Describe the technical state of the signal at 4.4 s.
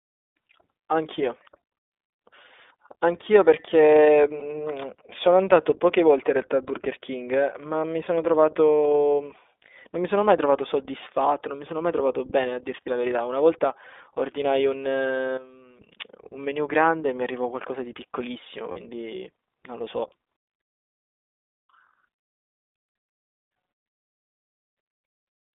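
At 4.40 s a single lost iLBC frame leaves a gap of about 20 ms, ending at 4.43 s. The decoder fills it by repeating the last pitch cycle blended with noise, so the moment sounds like a brief held, faintly buzzy vowel. Because each iLBC frame is coded independently, the signal recovers cleanly right afterwards.

Around this point the whole signal carries plainly audible iLBC codec damage. The band runs from about 200 Hz to 3.6 kHz, and the speech has a slightly rough, synthetic texture. The 20 ms frames point to the 15.2 kbps mode.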